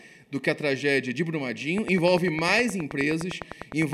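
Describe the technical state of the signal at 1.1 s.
At 1.1 s the signal is intact, with no audible fault at that moment.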